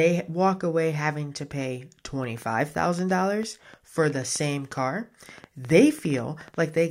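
From 1.51 s to 6.78 s a train of clicks runs over the speech, about 6.7 per second at an uneven pace, some forty in all. The pulses share one shape and reach roughly the level of the speech, so they tick audibly through words and pauses alike. The likely cause is electrical interference or a faulty connection or power supply. On a waveform they show as sharp, narrow spikes; on a spectrogram, as thin vertical broadband lines.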